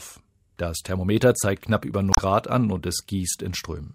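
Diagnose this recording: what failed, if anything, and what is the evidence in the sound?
The codec stage failed: damaged data in the compressed stream produces a brief garbled burst from 2.10 to 2.19 s. The decoder misread the corrupted frames and lost sync until it found a valid header. A spectrogram shows an abrupt, smeared block breaking the surrounding texture.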